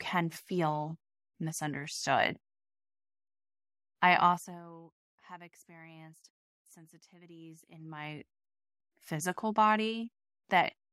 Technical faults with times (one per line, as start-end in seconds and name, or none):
7.68-8.40 zipper noise